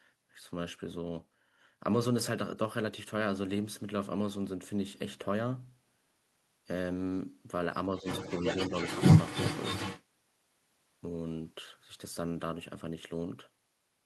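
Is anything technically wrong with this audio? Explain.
Yes. From 7.99 to 8.06 s and again from 8.69 to 8.73 s, there is speech suppressed in double talk. The echo canceller likely mistook simultaneous talk for its own echo and pulled the speech down, by about 10 dB and then about 5 dB, in two brief dips.

From 8.05 to 10.04 s, the other side's voice is leaking through. The echo canceller likely left loudspeaker sound in the microphone signal, and that second voice is heard roughly as loud as the talker.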